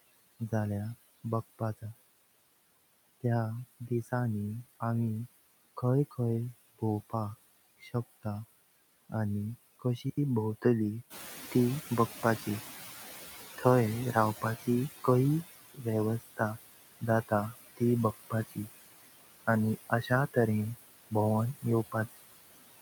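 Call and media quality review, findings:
Noise suppressor artifacts, whole clip. Background pulled down by about 17 dB. Residue sinks between phrases, swells under speech. Noise suppressor, per-frame band gating of steady noise.

Noise suppressor catching up, 11.1 to 14.87 s. Room noise jumps about 10 dB near 11 s, a real room change. It comes through with less reduction, then sinks over 3.77 s. Reduction there about 14 dB. Suppressor noise estimate lagging the step.

Speech cut by the noise suppressor, 15.74 to 15.86 s. Sound swallowed, dips up to about 16 dB. Suppressor misread speech as noise.
Speech cut by the noise suppressor, 19.9 to 20.11 s. Brief fade, up to about 13 dB. Each cut spans about a tenth of a second. Same mechanism.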